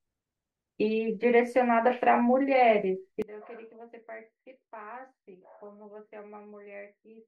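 From 3.22 s to the end, the speech falls by about 21 dB to a weak remnant, likely one channel inverted, so the shared centre cancels in mono. Unlike a plain gain drop or dropout, nearly everything shared vanishes while a faint copy remains.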